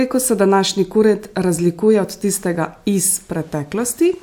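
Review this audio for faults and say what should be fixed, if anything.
Nothing here needs fixing, as no technical faults turn up anywhere in this speech recording.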